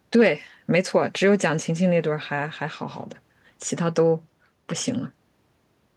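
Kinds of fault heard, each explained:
Nothing here calls for a fault line, since listening to the speech turns up no technical problem at all.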